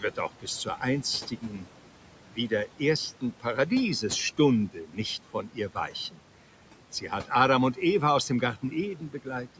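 Noise suppressor artifacts run through the whole clip. The suppressor judges each frequency band frame by frame and pulls down whatever it takes for steady noise, here by about 12 dB. The room noise, about 18 dB below the speech, drops away in the pauses and comes back under the voice.

Speech cut by the noise suppressor happens four times. At 1.3 to 1.67 s, the level dips by up to about 8 dB. At 4.73 to 4.98 s, the dip reaches about 11 dB. At 5.33 to 5.93 s, it reaches about 12 dB. At 8.97 to 9.26 s, it reaches about 9 dB. In each case the suppressor mistook soft parts of the speech for background and turned them down with it. Only brief fragments are hit, roughly a tenth to a fifth of a second in each span. Those bits sound swallowed and faint.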